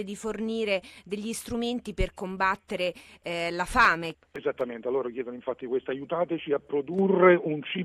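From 3.60 to 4.61 s there are CD scratch ticks. Five short ticks arrive at a steady pace, about five per second. Each is tiny, the longest lasting only a couple of milliseconds. A scratch or blemish on the disc passes the laser once per turn. Each pass wipes out more data than error correction can restore. The player then fills or mutes those few samples, leaving a brief click or gap.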